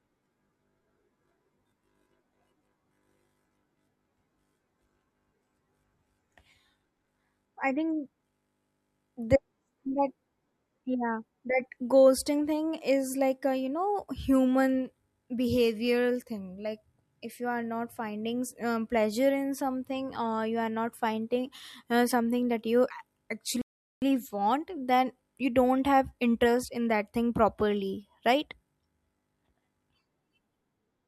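A speech clip with one rebuffering stall from 23.62 to 24.02 s: playback ran dry of downloaded audio, dropped to silence for about 0.4 s, then resumed exactly where it stopped at "want then you don't". Nothing is missing; the pause only adds time.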